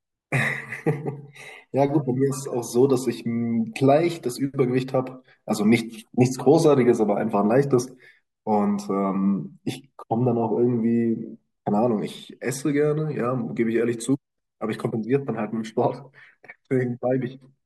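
No technical faults can be heard anywhere in the speech. At no point does the audio change in a way that would point to something going wrong along its path.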